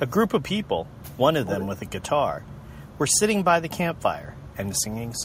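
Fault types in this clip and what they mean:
Echo leak, 1.45–1.9 s, 3.95–4.01 s and 4.37–4.48 s: a copy of the speech returns 186 ms late, at roughly 10 dB below it in the first stretch and very faint in the two later scraps, likely a far-end loudspeaker echo the canceller missed.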